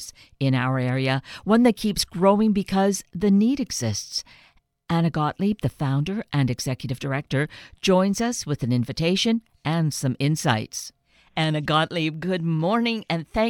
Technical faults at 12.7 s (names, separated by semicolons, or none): none